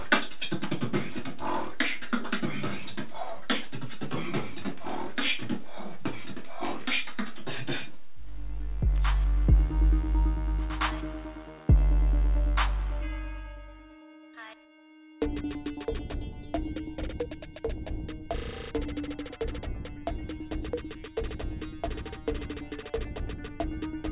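No technical faults can be heard anywhere in the audio.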